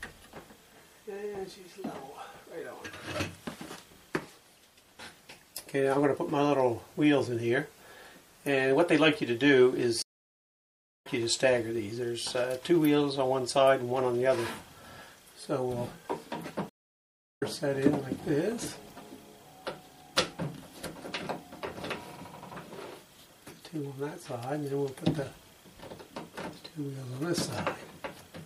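From the start, the whole clip has plainly audible damage that's most likely MP3 compression, at a level that fits something like 64 kbps. Faint detail flickers in and out between frames. That gives it that watery, swirly quality, with smeared attacks. At that rate the encoder is short of bits, so it drops whatever its hearing model judges least important.

At 10.02 s there's a stream reconnect. The audio goes silent for about 1.03 s, and when it comes back at 11.07 s it has jumped ahead by around half a second. The connection dropped, the player waited, then started a fresh decoder partway through a live stream, so the missed stretch is simply gone. The same thing happens again at 16.69 s, with a 0.72 s gap ending at 17.43 s and the sound picking up roughly 0.7 s further on.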